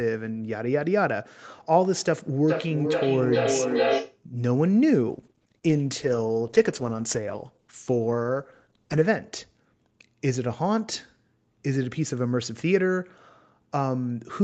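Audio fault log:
2.48–4.25 s, feedback echo between two devices: the sound comes back about every 0.4 s, thinner and more ringing each time, at about -1 dB relative to the direct sound. These are discrete repeats at a fixed interval from a second device's loudspeaker, not a smooth room reverb tail.
5.11–9.13 s, call bitrate drop: the Opus encoder fell from 48 kbps to 13 kbps and stayed at the lowest rate for about 4.0 s, so the sound turns rough and watery. Unlike packet loss, the degradation is continuous, with no gaps or dropouts.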